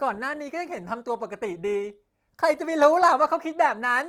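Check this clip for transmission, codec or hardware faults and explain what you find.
Nothing faulty turns up in the signal: the speech has passed through Opus voice compression, with content reaching up to about 20.2 kHz and only light coding damage, which fits a fullband CELT stream at around 24 kbps.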